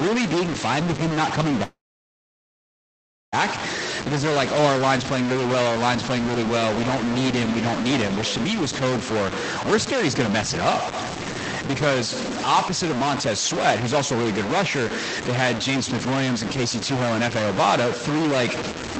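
From the start to the end, the speech carries distortion. The pauses are not clean either. They fill with a gritty noise. The likely cause is a stuck bit, one data bit held at a fixed value. About half the samples are then wrong by that bit's weight. Small values near silence flip with the waveform's sign, which puts noise into the gaps. The sound also lacks top end above 8 kHz, which fits a call codec such as Opus at a modest rate.

At 1.63 s the speech stops. A brief tail fades out. Then there is near-silence for about 1.6 s. At 3.34 s the speech resumes where it left off. Nothing seems to be skipped. This pattern is likely a call audio freeze. Packets arrived late and the jitter buffer ran dry. The receiver stretched the last sound, then went quiet. About 1.7 s of gap was inserted, and the delay grew by that much.

Near the end, the speech sounds hurried three times, with no change in pitch. 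These are jitter buffer speed-ups. From 13.83 to 14.81 s it runs at 110 percent, and roughly a tenth of a second is dropped. From 15.29 to 16.35 s it again runs at 110 percent, losing about the same. From 16.91 to 18.32 s it runs at 122 percent, and around 0.3 s goes. Each time the buffer held too much audio. The receiver cut short pitch-period pieces to catch up.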